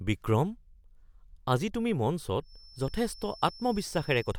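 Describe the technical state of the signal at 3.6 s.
At 3.6 s you're right in the middle of a feedback whistle that comes in at 2.39 s and hangs on to the end of the speech. It's a thin, steady tone at 5.3 kHz sitting well under the voice, roughly 25 dB down, swelling and fading slowly in level. The likely cause is a loudspeaker-to-microphone loop parked just at the edge of feedback, so that one frequency keeps ringing without ever building into a howl.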